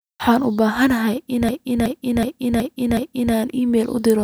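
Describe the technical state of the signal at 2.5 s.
At 2.5 s a short slice of speech repeats in a rigid stutter, about 0.37 s long and recurring 2.69 times a second from 1.49 to 3.34 s. This is a system hang loop: the system froze while the hardware kept replaying one ring buffer, which fits a 16384-sample buffer.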